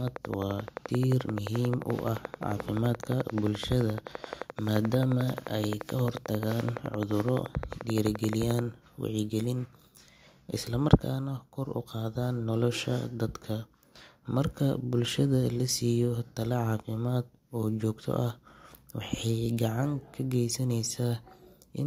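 From 0.08 to 8.6 s, a regular train of clicks ticks 11.5 per second, about 10 dB above speech, likely interference, drawing evenly spaced vertical lines on a spectrogram.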